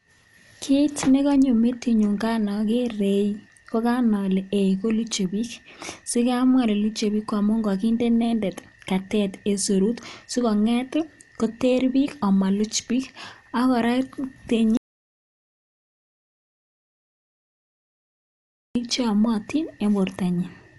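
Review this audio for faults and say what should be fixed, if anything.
The speech runs dull and band-limited throughout, with nothing above 11.4 kHz. Rough, fluttering noise clings to tonal parts. The codec damage is plainly audible. It sounds like Dolby Digital compression, likely at a low rate near 64 kbps. Starved frequency lines get dither noise instead of detail. Encode at a higher bitrate or keep a lossless master.

At 14.77 s the audio drops out to silence. It returns at 18.75 s. About 4 s is gone completely, with no room tone underneath. The input was likely lost while the recorder kept writing silence. A disconnected device or a stray mute could do this. Secure connections and monitor input levels during recording.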